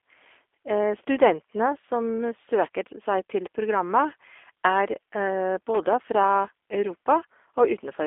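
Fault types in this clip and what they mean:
G.729 codec: the whole clip has the rough, synthetic texture of 8 kbit/s model-based coding, with nothing above about 3.6 kHz, unlike plain band-limiting, which stays smooth.
Loose connector crackle: a brief irregular scratchy burst from 5.74 to 5.77 s, a contact making and breaking, more ragged than a single clean digital click.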